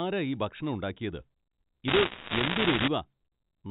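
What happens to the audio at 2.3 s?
At 2.3 s you're in the middle of a burst of bit errors on a digital phone line, running from about 1.88 to 2.88 s. A few percent of bits on the G.711 line get flipped, each corrupting a single sample, so the speech underneath stays intact but gets covered in sharp ticks and crackle.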